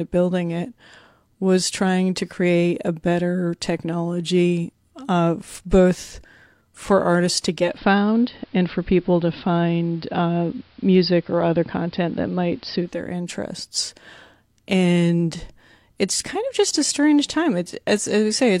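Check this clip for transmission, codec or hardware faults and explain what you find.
One fault: from 7.57 to 13.05 s, after "both for artists to", digital radio blending to analogue. The receiver lost the digital stream and cross-faded over 216 ms to AM, so faint hiss appears and level shifts about 2 dB.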